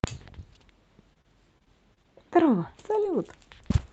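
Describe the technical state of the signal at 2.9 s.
At 2.9 s you're inside a stretch of scattered short gaps running from about 1.13 to 3.27 s. Roughly seven small chunks of the speech went missing or arrived too late, the longest around 30 ms, and the receiver covered each hole by stretching out the last bit of sound it had. It stays clear, but you get brief ticks, little smears and hiccups dotted through that span.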